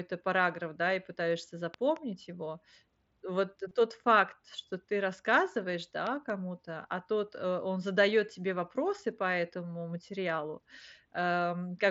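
A loud pop pair lands at 1.74 to 1.99 s, just after "параграф да и пытаешься": two sharp thumps, each about 10 dB above the speech, which carries on underneath. This is likely a voltage spike from a plug, switch or static discharge reaching the signal path.

Concealed Bluetooth headset packet loss follows at 3.69 to 3.71 s, just before "тот факт что ты", and again at 5.72 s. Over the wideband mSBC link, about 22.5 ms and then 7.5 ms of audio went missing. The receiver filled each gap by repeating a matching stretch of the preceding waveform. The first gap fits three lost 7.5 ms frames and leaves a brief buzzy hold with a slight warble. The second is nearly hidden.

Another loud pop pair comes at 6.07 to 6.32 s, just before "а тот э он". Again there are two thumps about 10 dB above the speech, most likely caused by an electrical transient.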